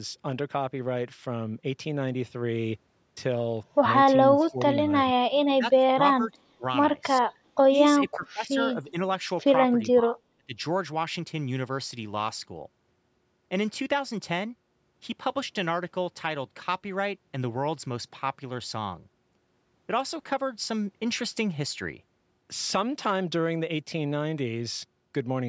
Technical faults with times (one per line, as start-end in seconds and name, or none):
4.31-4.89 speech suppressed in double talk
5.57-6.64 speech suppressed in double talk
7.21-7.25 speech suppressed in double talk
7.65-7.74 speech suppressed in double talk
8.05-8.96 speech suppressed in double talk
9.86-10.55 speech suppressed in double talk